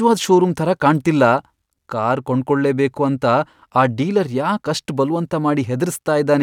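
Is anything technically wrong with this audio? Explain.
No, nothing technically wrong stands out here; this bit of speech comes across without any audible fault.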